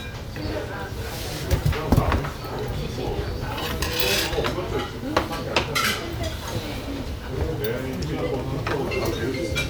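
No technical fault can be heard anywhere in these sounds. Nothing in the recording or playback chain audibly interrupts, distorts or alters them at any point.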